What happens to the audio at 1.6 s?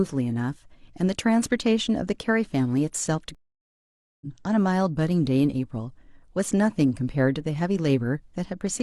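At 1.6 s the speech runs on without any audible dropout, click, distortion or other fault.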